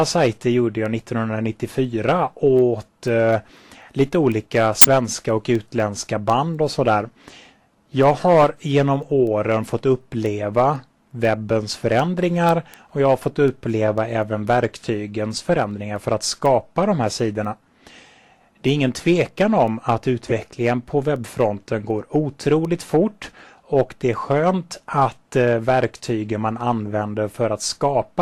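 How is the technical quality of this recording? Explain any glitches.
The recording has two distinct problems: a steady train of ticks running through nearly the whole clip, and four brief bursts of garbled sound.

Word clock ticks: From 0.11 s to 28.10 s there is a sharp tick roughly every 0.3 s, about a hundred in all, uneven in strength. This is word clock slip. The receiving device was running on its own clock rather than locking to the incoming digital stream, so whenever the two drifted a full sample apart, one sample was dropped or repeated. The spacing points to a clock mismatch of very roughly 100 ppm.

Corrupt frame decoded: Short chirps or bursts of noise land at 4.82–4.88 s, 8.42–8.44 s, 20.29–20.32 s and 22.65 s. The first is the loudest, and the others fall away to about −10, −15 and −20 dBFS. Each burst is a damaged compressed frame, or a run of a few frames, that the decoder played anyway. 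Its corrupted data put energy at the wrong frequencies for about the length of a frame.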